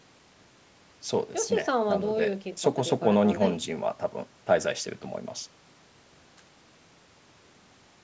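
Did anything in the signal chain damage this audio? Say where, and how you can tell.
No, nothing in the chain harmed this speech; the one stage you can hear is the call's microphone processing doing its usual job, trimming the lowest bass and leaving nothing above 8 kHz, and that's normal.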